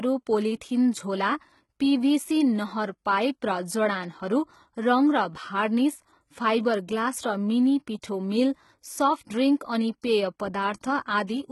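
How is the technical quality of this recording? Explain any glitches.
Quality is poor, with heavy codec damage throughout. The cause is likely HE-AAC compression at a low bitrate near 16 kbps. Treble is rebuilt from copied lower bands, so s sounds turn gritty and metallic. Nothing remains above 11.8 kHz.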